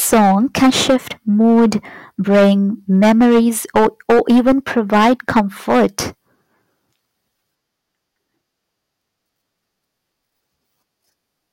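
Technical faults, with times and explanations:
0.02–0.96 s, 1.40–1.76 s, 2.30–2.52 s, 2.94–3.40 s and 3.76–5.99 s, hard clipping: the speech is overdriven by about 6 to 12 dB, so its peaks are sheared flat, and the added high harmonics give a harsh fuzz on loud syllables.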